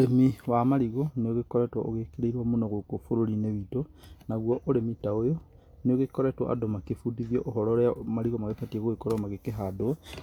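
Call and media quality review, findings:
No faults found in this speech recording. The audio runs without any audible disruption.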